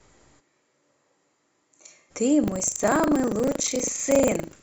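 From 0.41 to 2.09 s the speech abruptly turns roomy and hollow, with thinner bass, a level drop of about 10 dB and a noise floor around 30 dB below the speech. This is likely a switch to a distant microphone. On a spectrogram the low end thins and reverberant smear fills gaps between syllables.

From 2.4 s to the end, buffer tearing adds a robotic rattle at 25 Hz, present only while speech sounds. Writer and reader have slipped, so roughly 15 percent of each buffer replays audio from about 70 ms earlier. The waveform shows hard joins every 40 ms, seen as vertical stripes on a spectrogram.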